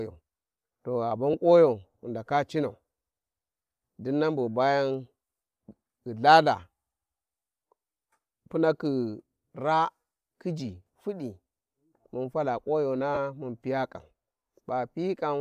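Speech, where lost LE Audio frames make the LC3 decoder refill the gaps from the previous spectrum with scrambled signs, leaving a brief noisy smear right after "to gha" at 1.33 s, consistent with one 7.5 ms frame, and a longer one from 13.14 to 13.18 s, closer to three frames. A faint grainy edge throughout is likely from the LC3 compression itself.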